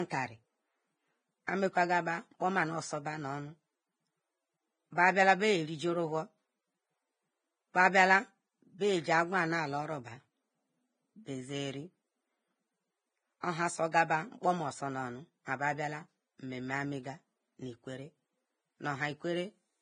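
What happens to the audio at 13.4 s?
A brief hiss arrives just ahead of a sharp attack, from 13.40 to 13.43 s, and the attack itself lands soft and smeared. This is pre-echo: the transform codec spread its quantisation noise across the whole block, so noise sized for the loud onset also filled the quiet 30 ms before it.

Underneath, the speech is hissy and grainy, with nothing above 9.7 kHz. This is likely heavy Vorbis compression at a low bitrate of around 19 kbps, which quantises the treble into noise.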